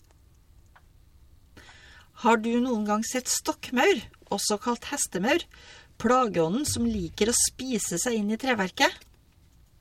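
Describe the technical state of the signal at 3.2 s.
At 3.19 to 3.21 s the speech carries a corrupt frame decoded: flipped bits in a few compressed frames were decoded anyway, so misread gains and codes put energy at the wrong frequencies. It sounds like a brief chirp or squeak lasting about 24 ms, peaking around -25 dBFS. A spectrogram would show a short, blocky patch of misplaced energy breaking the speech harmonics, and the waveform an abrupt burst.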